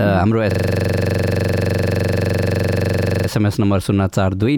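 A system hang loop from 0.51 to 3.29 s repeats one 42.67 ms slice, fitting a 2048-sample buffer, as a rattling stutter at 23.4 Hz.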